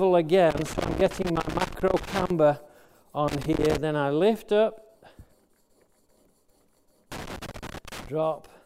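Loose connector crackle breaks through three times: 0.50 to 2.30 s, 3.28 to 3.78 s, and 7.12 to 8.07 s. A worn contact is making and breaking as it moves. The signal gets chopped into irregular bursts of scratchy crackle.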